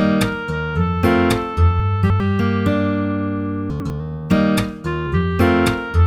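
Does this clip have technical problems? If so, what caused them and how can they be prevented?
Yes. Between 1.8 and 2.2 s, and again between 3.7 and 3.9 s, there are chunks out of order. A 100 ms block of audio plays after blocks that should follow it, three places late in the first case and one in the second. This causes a brief jumbled stretch with hard joins. Unlike a dropout, no audio is missing: every piece is heard, only in the wrong sequence. Preventing it means tagging chunks with sequence numbers and reordering them in a jitter buffer before playback.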